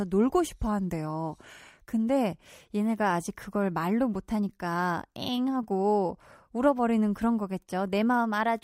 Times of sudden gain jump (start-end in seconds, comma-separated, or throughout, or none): none